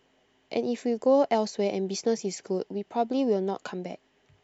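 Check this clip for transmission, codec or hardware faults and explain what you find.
Nothing in this speech recording points to a fault. Listening through the whole recording turns up no event that needs explaining.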